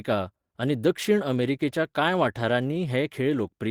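No technical faults can be heard anywhere in this speech recording. There is nothing in it to place on the timeline.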